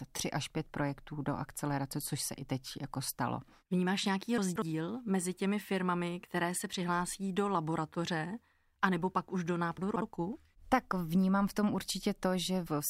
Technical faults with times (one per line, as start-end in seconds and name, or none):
4.38-4.62 chunks out of order
9.78-10.02 chunks out of order